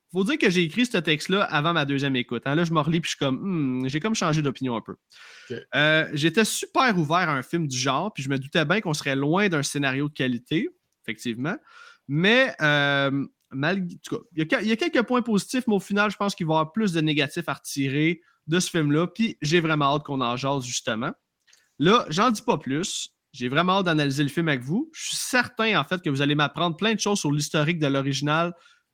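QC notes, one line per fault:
2.67–5.75 s and 19.18–24.45 s, just before "avec vous": call bitrate drop. Speech turns coarse and muffled at its worst for 2.5 s and 3.7 s, consistent with the encoder falling from about 32 to 17–18 kbps.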